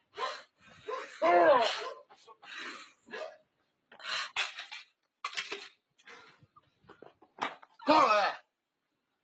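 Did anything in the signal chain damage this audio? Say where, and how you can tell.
Yes. The damage is in the call processing stage. A noise suppressor made for speech was left running on material it wasn't built for, and you can hear it through the whole clip. Sustained parts and tails keep sagging while attacks get through, so the level swings by about 10 dB and the sound pumps and thins out. The suppressor mistakes steady tone and decay for noise and rides them down.

On top of that steady pumping there are six spots where the suppressor cut the sound hard. They fall at 0.42–0.87 s, 2.03–2.48 s, 2.83–3.13 s, 3.31–4.03 s, 6.33–6.68 s and 6.84–7.39 s. The deepest drops are about 17, 17, 15, 18, 12 and 14 dB. Held or fading sound sinks or gets chopped short there, which points to the suppressor judging those stretches as pure noise. The Opus path at 24 kbps, with nothing above 8 kHz, is a normal band limit and not part of the problem.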